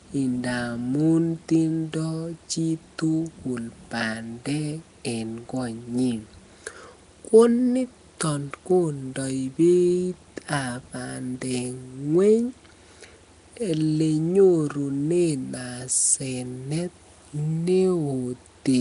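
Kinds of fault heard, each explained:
Nellymoser compression: a rough, hissy halo and smeared underwater quality throughout, nothing above about 10.6 kHz, likely from Flash's Nellymoser Asao codec filling unfunded bands with noise.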